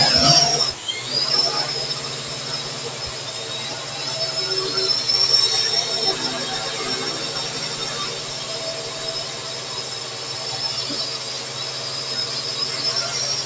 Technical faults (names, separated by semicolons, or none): noise suppressor applied to music or sounds